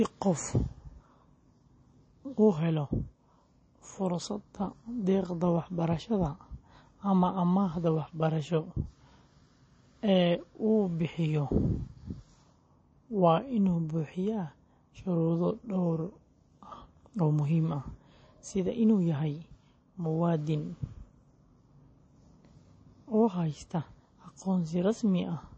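Right through the speech there's a hard ceiling at about 8.3 kHz and a watery swirl, likely MP3 compression starved of bits, consistent with a low rate around 32 kbps.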